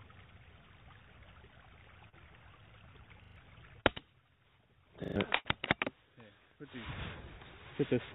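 Call audio, band-limited with nothing above 4 kHz, which fits a G.711 A-law narrowband path, carries three kinds of transport fault. Short concealed packet loss occurs at 2.09 to 2.15 s and 3.80 to 3.86 s: roughly 30 ms failed to arrive each time, and the decoder extrapolated the preceding sound before crossfading back, leaving a brief smear or wobble. A repeated buffer appears at 3.24 to 3.36 s and again at 5.04 to 5.16 s, where a 40 ms block plays three extra times with hard joins, giving an audible stutter, because the playout device ran dry and reissued its last buffer, losing about a tenth of a second of audio. A burst of packet loss follows at 5.36 to 5.48 s: about 90 ms went missing, concealment held and faded the last sound, then playback resumed further on with that stretch gone.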